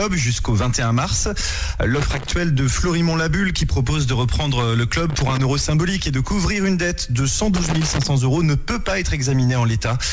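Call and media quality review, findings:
Loose connector crackle at 1.99–2.32 s, 5.10–5.44 s and 7.56–8.07 s. Irregular scratchy bursts, each a third to half a second long. Probable component is a worn or dirty plug or jack. The contact makes and breaks as it moves, chopping the signal, and any DC on the line adds pops. Waveform shows ragged dropouts and sharp spikes. Spectrogram shows broadband vertical streaks up to the 8 kHz ceiling, which fits a G.722 wideband call path.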